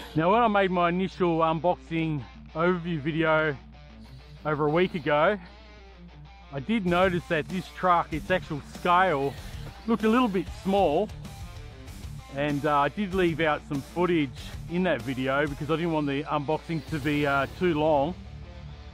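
A steady low tone sits under the sound from start to finish. It is mains hum at 60 Hz, the North American power-line frequency. It never fades or shifts, so it is constant interference, not part of the recording. It lies roughly 25 dB below the main signal. The likely cause is a ground loop or a nearby transformer coupling the power supply into the audio path.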